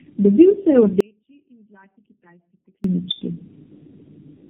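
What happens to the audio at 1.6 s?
An audio dropout to a faint residue runs from 1.01 s to 2.84 s, about 1.84 s in all. The speech cuts off abruptly, likely because the signal was lost while the path after the break stayed live. The gap holds only a faint sound, roughly 35 dB below the speech, and the speech snaps back at the end with no fade.

Tandem speech coding also affects this moment because it runs through the whole clip. The audio passed through four AMR-NB narrowband encodings, linked by G.711 stages, and each codec reworked the previous one's output. Nothing remains above 3.8 kHz, which leaves the speech around the gap muffled, rough and warbly.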